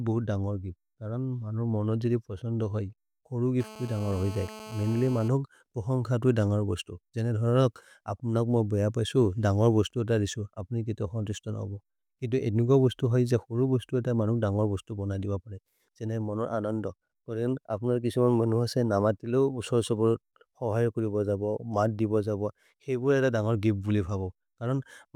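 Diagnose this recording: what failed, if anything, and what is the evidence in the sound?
GSM phone buzz in the analogue wiring, 3.60–5.28 s: rectified radio bursts give a steady raspy 217 Hz buzz about 17 dB below speech, harsher than mains hum.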